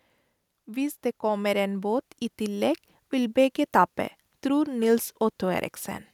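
Automatic gain rising runs from 0.52 to 3.46 s, ending just before "tape tror". The gain control judged the input too quiet and raised its gain gradually by about 6 dB, so the speech and background noise swell together over nearly three seconds.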